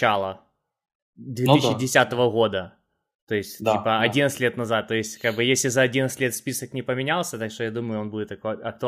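Nothing in this recording stands out as a technical fault; the speech runs along with no dropouts, glitches or breaks anywhere along the way.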